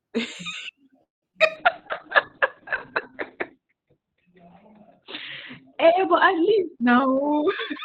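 A speech clip that stalls briefly at 1.03 s: the sound stretches into a fading buzz, then goes quiet for about 160 ms before picking up at 1.24 s with nothing lost. That's most likely a call audio freeze, with late packets draining the jitter buffer. Right after, there are two short concealed packet losses at 1.32–1.35 s and 1.37–1.40 s, each losing about 20 ms, with roughly 11 ms and 7 ms patched over by extending the previous sound, so you get a quick smear or wobble. From 1.58 s to the end there's a call bitrate drop. The audio turns rough and watery and loses its top end, going from a 20 kHz band down to a 4 kHz cutoff, which fits the encoder falling from around 64 kbps to about 6 kbps and staying at the bottom for roughly 2.3 s. Finally, a jitter buffer speed-up from 6.96 to 7.49 s cuts out around 150 ms in small pitch-period chunks, so the speech runs about 21% faster at unchanged pitch and sounds hurried.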